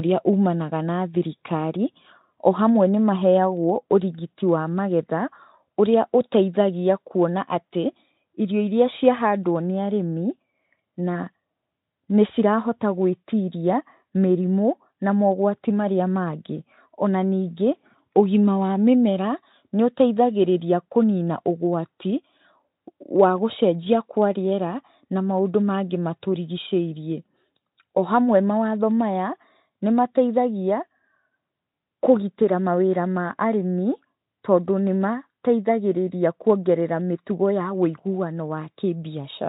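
No technical faults occur in the speech, so there is nothing to describe in time order.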